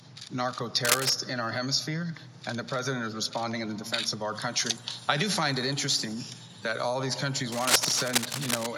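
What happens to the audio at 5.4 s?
Nothing goes wrong at 5.4 s: the audio there carries on without any dropout, click, glitch or other audible fault.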